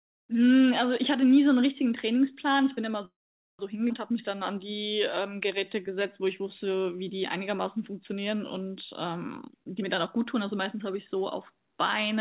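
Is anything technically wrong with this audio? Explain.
Yes, there are four timing faults in this speech.

From 3.05 to 3.62 s there is a call audio freeze. Delayed packets likely emptied the jitter buffer. The sound tails off into about 0.47 s of silence, then resumes with nothing lost.

From 3.89 to 3.93 s there is a skip ahead. Roughly a third of a second of audio is dropped. The two sides join almost directly, with little gap.

From 4.12 to 7.21 s there is a jitter buffer slow-down. The receiver repeated pitch periods to rebuild its reserve. The speech runs at 92% speed at the same pitch, stretched by 267 ms.

From 9.21 to 11.42 s there is a jitter buffer speed-up. Short pitch-period pieces were cut to reduce excess delay. About half a second goes, so the speech runs at 124% speed and sounds hurried.

The audio also has nothing above 4 kHz, which fits a G.711 call path.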